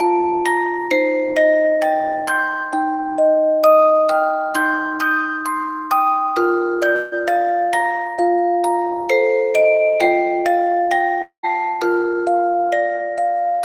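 A long network dropout likely cut delivery at 6.95–7.14 s and 11.22–11.45 s. A fading buzz covers each gap, ending in brief silence the second time.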